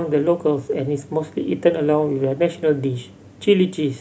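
No technical faults can be heard in this speech recording. Nothing in the audio path draws attention to itself at any point.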